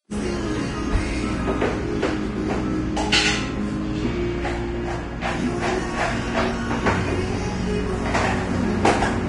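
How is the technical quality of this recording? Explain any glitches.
The technical quality is poor throughout. The sound is hissy and grainy, with roughened tones, blurred attacks and nothing above 10.6 kHz. This is likely Vorbis compression at a low bitrate around 31 kbps, where coarsely quantised treble turns fine detail into noise.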